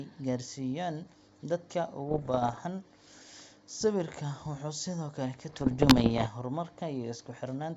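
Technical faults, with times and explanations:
2.09 to 2.60 s and 5.46 to 6.28 s, bit errors on an ADPCM link: bursts of pops and rough crackle with brief level jumps, heavier in the second burst, at roughly one flipped bit in a hundred. Each corrupted code knocks the G.722 decoder's step size and predictor off track, so every error smears over several milliseconds.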